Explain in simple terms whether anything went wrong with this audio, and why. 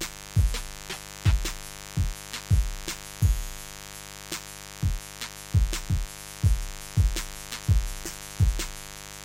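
A steady, raspy buzz sits under the sound from start to finish, fairly loud next to everything else. This is mains buzz: electrical interference from the 50 Hz power supply leaks in as sharp spikes twice per cycle, creating a gritty hum.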